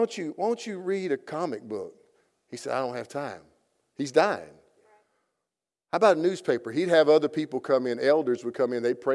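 Speech recording; no technical faults can be heard.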